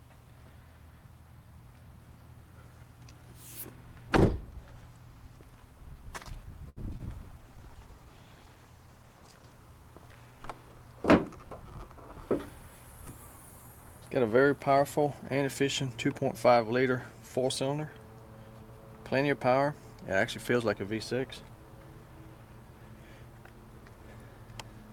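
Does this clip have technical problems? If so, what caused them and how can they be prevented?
Yes. There are three kinds of fault.

A short stall from a late packet runs from 6.69 to 6.79 s. The receiver's jitter buffer ran empty, so it held the last sound for about 72 ms until the packet arrived. Nothing is lost, which sets it apart from the losses that follow: the sound is only stretched. A deeper jitter buffer would prevent it.

Short concealed packet loss occurs at 6.89 to 6.91 s and at 6.97 to 7.01 s. About 20 ms of audio never arrived each time, and the gap was filled by extending the preceding sound, leaving a brief smear or wobble. Unlike the stall, real content is missing here, and at the first loss the playout also catches up slightly. Forward error correction or redundancy on the network path would prevent it.

A call bitrate drop from 48 to 16 kbps runs from 7.43 to 9.58 s, staying at the lowest rate for about 2.08 s. 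The encoder coded more coarsely, so the sound turns rougher for the whole stretch rather than for a single moment. More stable bandwidth, or a higher minimum bitrate, would prevent it.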